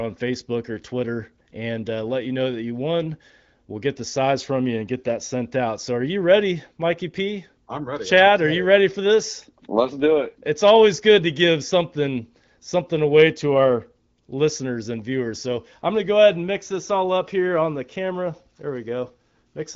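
Nothing faulty is audible anywhere in this speech recording.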